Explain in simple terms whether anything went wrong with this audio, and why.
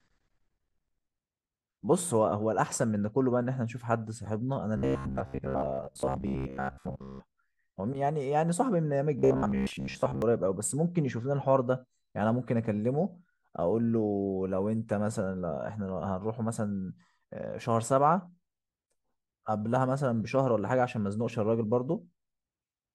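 Twice the speech turns into a stiff, metallic buzz that still loosely tracks what is being said: from 4.77 to 7.21 s, and again from 9.19 to 10.22 s. The buzz has a fixed low pitch of 66.7 Hz. This is robotic sound from repeated short buffers. The likely cause is new audio arriving too slowly, so the player kept replaying the last sliver of sound, about 15 ms long, and skipped most of the real audio during those stretches.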